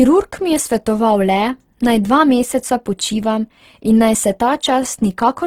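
Across the whole speech clip the sound is grainy and rough, with a noisy texture where tonal detail should be, likely from Opus compression in its CELT mode at a rate that fits about 16 kbps. Unlike MP3's swirling holes, bands are noise-filled, and content reaches 20.2 kHz.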